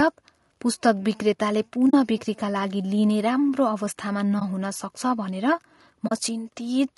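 The speech carries plainly audible codec damage from start to finish. It sounds rough and grainy, with noise filling the gaps between pitch harmonics and a thin, somewhat synthetic top band. The likely cause is low-delay AAC compression, AAC-ELD at a rate consistent with about 32 kbps. Its short frames resolve harmonics poorly and spend bits fast, so the graininess follows the voice. A steady background hiss, by contrast, would sit underneath regardless of the speech.

AAC frame loss with muting then opens three brief holes: 1.89 to 1.94 s, 4.39 to 4.42 s, and 6.07 to 6.12 s. The first and last match two lost frames of about 20 ms each, and the middle one matches a single frame. Each time, the decoder zeroed the missing spectrum, and the overlapping windows faded the sound down and back up. The result is a soft-edged gap, unlike a hard dropout, which would snap off abruptly.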